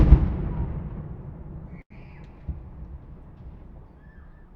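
From about 1.81 to 2.08 s, the sound hangs on itself with a faint buzzy dip. This is a short stall from a late packet: the jitter buffer ran dry, so roughly 91 ms was filled by stretching the last sound, and nothing was lost once it arrived.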